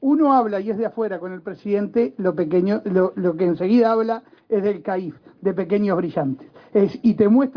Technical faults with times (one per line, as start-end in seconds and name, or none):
none